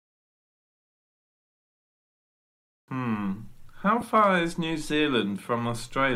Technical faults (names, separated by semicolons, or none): lost LE Audio frames